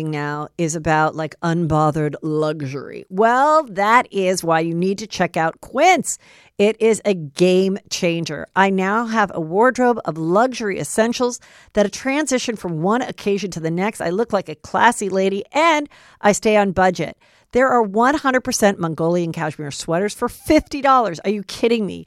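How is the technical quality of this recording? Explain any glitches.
No technical faults are audible.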